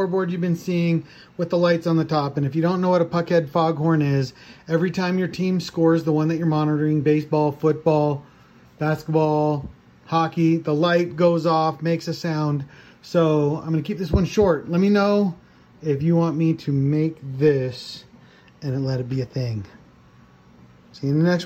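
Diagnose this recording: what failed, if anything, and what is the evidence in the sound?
Nothing failed; no stage shows any fault.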